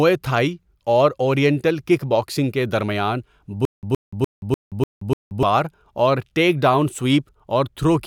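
Right after "کک باکسنگ کے درمیان", from 3.65 to 5.43 s, a stutter with silent gaps sets in: a 119 ms fragment repeats six times, each followed by 177 ms of digital silence, a 296 ms cycle. A stalled stream is the likely cause. The waveform shows identical blocks separated by flat silent stretches, and the spectrogram shows matching stripes with black gaps.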